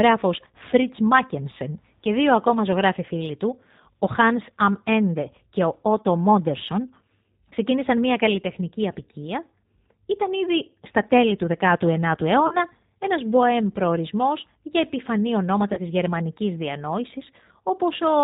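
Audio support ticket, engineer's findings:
G.729 codec, whole clip: speech band-limited, nothing above 4 kHz, rough synthetic texture, plainly audible. Consistent with 8 kbit/s G.729A. Unlike generic lowpass, the roughness comes from pulse-coded excitation and a vocal tract filter rebuilding each 10 ms frame.

VoIP packet loss concealed by the speech codec: 5.22–5.28 s before "και ο", 12.47–12.57 s before "ένας μποέμ προορισμός για", 15.73–15.80 s after "προορισμός για επιφανή ονόματα". Decoder extrapolates last pitch and filter, so gaps turn into fading buzzy tone or coloured noise, not silence or clicks. Sizes fit 20 ms and 40 ms lost. Speech stays weak briefly after each.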